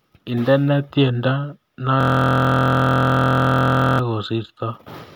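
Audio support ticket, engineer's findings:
System hang loop, 2.01–3.99 s. Speech replaced by steady buzz at 43.1 Hz: one 23.22 ms slice repeating identically, fits a 1024-sample ring buffer. Driver/host froze; hardware kept replaying buffer. Unlike a dropout or codec stutter, no silence, no variation, no machine-gun gaps.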